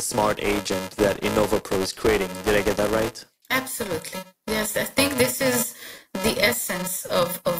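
From start to finish, a filter restarted on every block forgets its state and begins each block from silence, leaving a small transient at every boundary. The result is a 375 Hz buzz, which fits a 128-sample buffer, riding on the speech and rising and falling with its level.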